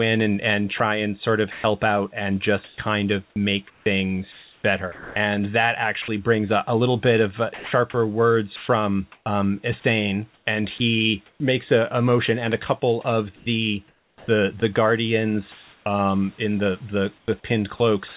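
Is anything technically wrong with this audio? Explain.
Yes. The speech has several stretches where the sender's voice detector interfered, and one pause where the background was replaced with synthetic noise. The whole clip also stops at 4 kHz, as expected on a narrowband telephone-codec call path.

Sound chopped by the voice detector occurs at 0.78–1.64 s, 2.64–5.16 s, 8.56–11.4 s, 13.36–14.62 s and from 17.18 s to the end. The detector likely toggled transmission repeatedly, cutting quiet syllable edges into comfort noise. Between about 0.14 and 0.92 s is lost per stretch, so the speech sounds choppy. A waveform shows gaps with flat, even noise inside the speech.

Sound dropped by the voice detector hits at 6.02–6.08 s (60 ms) and 7.54–7.72 s (180 ms). Quiet speech was likely judged to be background, so sending stopped and steady noise filled in until the detector retriggered. On a spectrogram the speech harmonics vanish abruptly, leaving smooth, uniform noise.

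Comfort noise in place of the background appears at 15.52–15.86 s, most likely from discontinuous transmission during a pause. The real room noise, about 35 dB below loud speech, gives way to a featureless hiss about 1 dB quieter. The spectrogram shows the textured background turning suddenly smooth.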